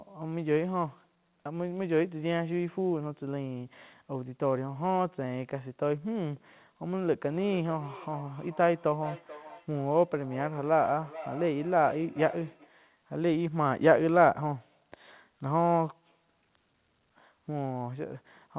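Speech over a call, with a feedback echo between two devices from 7.09 to 12.73 s. Each phrase returns at a steady interval of roughly 400 ms. The repeats are thin and ringing, and reach about 15 dB below the speech. A second device in the same room plays the call aloud. The first microphone picks it up again. Its echo canceller cannot remove sound it did not play. The whole clip stops at 4 kHz, which fits a telephone-grade call codec.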